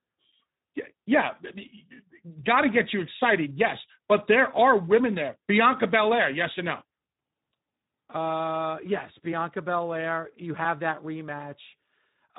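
Speech runs through the Speex codec from start to finish, with plainly audible hoarse, noisy coding damage and nothing above 3.8 kHz, which fits a low bitrate around 11 kbps. Unlike a plain telephone-band filter, the hoarse, noisy excitation noise reveals a CELP coder.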